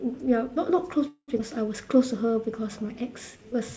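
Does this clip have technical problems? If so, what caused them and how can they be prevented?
Yes. At 1.08 to 1.30 s the speech stalls into a fading buzz, then silence, for about 0.2 s before resuming where it stopped: a call audio freeze, likely from delayed packets emptying the jitter buffer. A steadier network path or a larger jitter buffer target prevents this.

At 1.38 to 1.41 s the speech skips ahead, losing roughly a tenth of a second, as a stretch of audio is dropped while later audio was already waiting. Draining late audio gradually by time-compression, instead of dropping it, avoids the jump.

From 1.85 to 3.43 s the speech drags at about 93% speed, with stretched sounds at unchanged pitch. This is a jitter buffer slow-down, repeating pitch periods to add 119 ms of reserve. Keeping the buffer at a stable target depth avoids this stretching.

Nothing above 8 kHz comes through, which fits the G.722 call codec.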